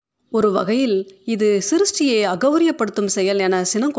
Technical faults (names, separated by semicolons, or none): none